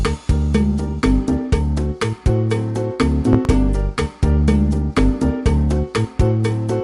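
Loud pops at 3.33–3.48 s (two in quick succession) and 4.98–5.01 s, the first pair well above the sound and the second somewhat less, likely from a sudden voltage step, such as a switch, static or a driver glitch, while the sound carries on underneath.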